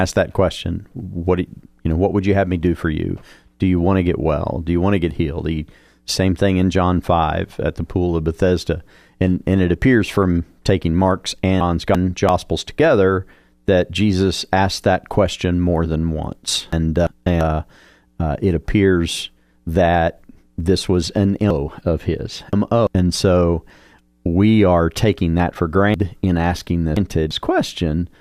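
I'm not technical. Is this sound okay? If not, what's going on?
No. Chunks out of order happens four times: 11.6 to 12.3 s (after "appears from taking mark's", before "together that jesus asked"), 16.7 to 17.4 s (after "question more than once"), 21.5 to 22.9 s (after "that this was an"), and 25.9 to 27.3 s. The speech arrives in pieces about a third of a second long, and one piece lands late and plays after the ones that should follow it. Nothing is missing, but those moments sound jumbled.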